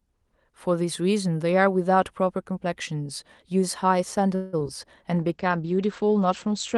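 From 4.35 to 4.55 s a call audio freeze occurs, likely because packets were delayed and the jitter buffer ran dry. The last sound is stretched into a fading buzz or hiss for 175 ms. The speech then resumes where it stopped, 175 ms late, with nothing lost.

Two short concealed packet losses follow at 4.59 to 4.62 s and 4.64 to 4.67 s. Each time, about 20 ms of audio missed the decoder and was patched over, leaving a brief smear or wobble.

A call bitrate drop begins at 5.15 s and lasts to the end. The Opus encoder falls from 32 to 12 kbps and its bandwidth narrows from 12 kHz to 8 kHz, so the speech turns coarse and muffled.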